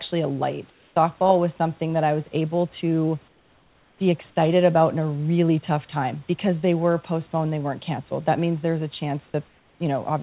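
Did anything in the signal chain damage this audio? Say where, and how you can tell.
Yes, at the call-processing stage. In three pauses the room background gives way to comfort noise: 0.70 to 0.96 s, 3.28 to 4.00 s, and 9.48 to 9.80 s. Each time the detailed ambience, sitting about 35 dB under the loudest passages and already capped near 4 kHz by the call codec, becomes a flat, featureless hiss roughly 3, 6 and 4 dB quieter. This is likely discontinuous transmission: the sender's voice detector halted audio and the receiver synthesized shaped noise until sound resumed.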